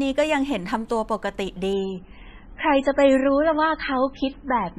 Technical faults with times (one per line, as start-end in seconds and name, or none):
1.73-4.79 adaptive stream at a lower bitrate